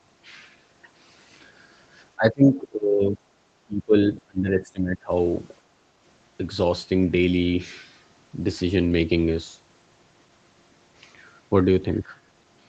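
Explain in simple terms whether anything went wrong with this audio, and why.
The speech dips sharply from 2.16 to 3.2 s, 3.66 to 3.95 s and 4.14 to 5.11 s, about 2.3 seconds in all. This is likely speech suppressed in double talk: the call's echo canceller mistook overlapping talk for echo and turned it down. Unlike network dropouts, the speech is turned down by the call's own processing rather than lost on the way.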